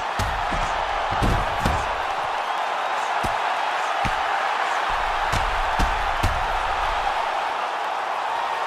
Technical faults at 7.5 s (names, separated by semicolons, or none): damaged data in a compressed stream